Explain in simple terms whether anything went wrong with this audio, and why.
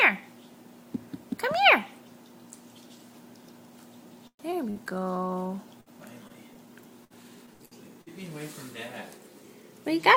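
Several network-related faults are audible, all of them typical of a call connection.

From 4.27 to 4.42 s there is a call audio freeze: the sound stalls for about 117 ms, ending in roughly 80 ms of silence, then carries on with nothing lost. The likely cause is delayed packets leaving the jitter buffer empty.

At 4.51 to 4.55 s a skip ahead drops roughly 70 ms of audio, and playback jumps forward almost seamlessly.

From 4.70 to 4.78 s a burst of packet loss removes 60 ms. The receiver fills a 54 ms hole by extending the last sound.

From 4.83 to 5.49 s a jitter buffer slow-down stretches the audio to 88% speed at the same pitch, adding 87 ms to rebuild the buffer's reserve.

Between 5.81 and 8.09 s repeated packet loss (robotic sound) causes eight short gaps, the longest 62 ms. Together they lose 240 ms of audio, patched with filler, so this stretch sounds choppy.

From 9.42 to 10.15 s a jitter buffer speed-up runs the audio at 104% speed. 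It trims roughly 40 ms to reduce accumulated delay while keeping pitch unchanged.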